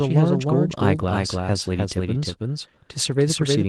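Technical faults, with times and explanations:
Throughout, doubled audio track: every syllable of the speech is followed by a second, equally loud, full-band copy about a third of a second later, with no decay or room colour, likely because a slower capture path or an edit layered two copies out of step.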